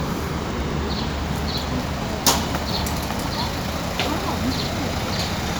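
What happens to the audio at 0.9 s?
At 0.9 s the audio is inside a run of periodic USB or driver dropouts lasting from 0.11 to 5.5 s. Every 0.1 s, a stalled bus or driver drops roughly a millisecond of sound and replaces it with silence, heard as a regular tick. On the waveform these are evenly spaced gaps; on a spectrogram, thin vertical broadband lines.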